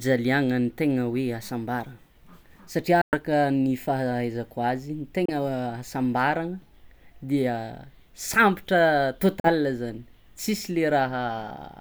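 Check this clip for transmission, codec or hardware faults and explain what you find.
Three brief silences interrupt the speech: from 3.01 to 3.16 s, from 5.25 to 5.32 s, and from 9.40 to 9.49 s. Each drops to nothing, and the speech then resumes further along, with roughly 112 ms, 28 ms and 42 ms of material skipped rather than delayed. This is likely a Bluetooth dropout: audio packets missed their delivery window to the headphones and were discarded, so playback fell silent until intact packets arrived and carried on.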